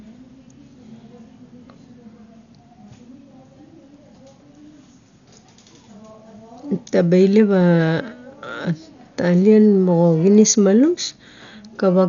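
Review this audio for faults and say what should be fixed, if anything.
Dolby Digital compression, likely the cause, runs throughout: the speech is dull, with nothing above 6.9 kHz, and a rough, fluttering noise clings to voiced sounds. The damage is heavy, consistent with roughly 48 kbps, where empty frequency lines are filled with dither noise. To prevent it, encode at a much higher bitrate or keep an uncompressed master.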